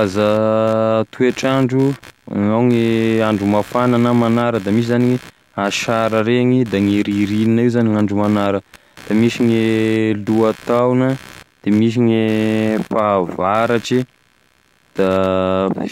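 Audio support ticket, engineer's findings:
Computer activity noise across the whole speech clip. Buzzy, chirping texture pulsing at roughly 70 per second, around 25 dB under the speech. Probable component: the shared ground between the computer and the audio interface, modulated by CPU, GPU or mouse load. Tell-tale versus mains hum: hum is a steady tone, whereas this pattern shifts with computer activity, not with the speech.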